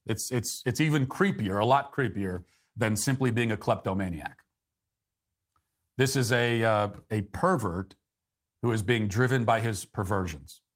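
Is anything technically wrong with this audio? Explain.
No, nothing technically wrong turns up here; it's a speech recording with no faults to point to.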